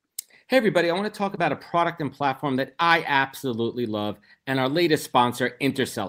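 At 1.35 s, between "I want to talk" and "a product and platform", there is a short concealed packet loss lasting about 40 ms. Roughly 20 ms of audio arrived too late to decode. The receiver bridged the gap by extending the preceding sound, which leaves a brief smear before the real signal resumes.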